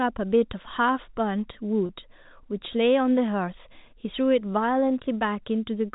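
At 1.86 s the speech hits a packet loss with pitch repetition. About 30 ms of audio, which fits a single lost packet, is missing until 1.89 s. The receiver fills the hole by replaying the last pitch period, so the sound briefly holds on a slightly buzzy, static tone before the speech resumes. On a spectrogram the harmonics run flat and unchanging across the gap. The waveform shows identical cycles repeating where natural variation should be. The telephone-band coding around it, which fits G.711, stops at 4 kHz.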